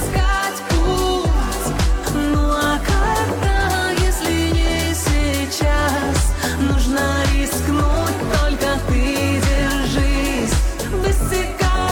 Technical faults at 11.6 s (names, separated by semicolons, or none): none